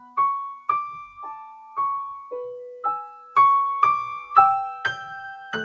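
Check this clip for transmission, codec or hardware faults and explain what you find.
One fault stands out, right at the start of the clip. From 0.0 to 0.17 s, the sound is cut by the noise suppressor. The suppressor mistook the opening sound for background noise and pulled its gain down, by about 10 dB at the deepest point, over roughly 150 ms in total. The sound therefore starts thin and recessed, then comes up to full level. On a waveform, the first fraction of a second shows a shrunken envelope. On a spectrogram, that opening region looks faint across the band before brightening to normal density.

The call path itself is audible as a hard ceiling with nothing above 8 kHz, which fits a wideband codec such as G.722.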